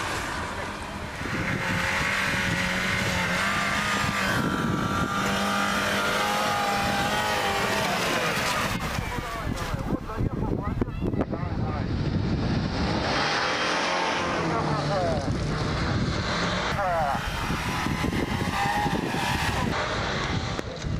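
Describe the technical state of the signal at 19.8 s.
At 19.8 s the signal is intact, with no audible fault at that moment.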